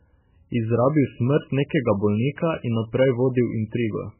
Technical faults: MP3 compression

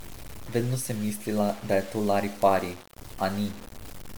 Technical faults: low bit depth without dither; generation loss

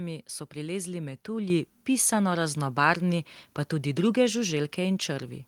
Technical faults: microphone volume stepped up

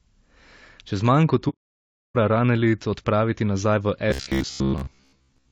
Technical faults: low-delay AAC compression; AAC frame loss with muting; robotic sound from repeated short buffers

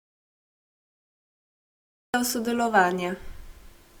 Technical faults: low-bitrate audio saved at a high bitrate; audio dropout to silence

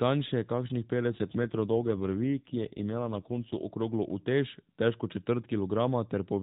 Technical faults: AMR rate drop

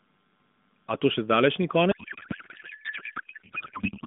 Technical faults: codec payload misread

